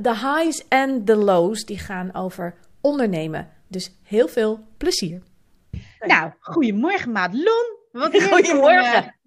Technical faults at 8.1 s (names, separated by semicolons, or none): none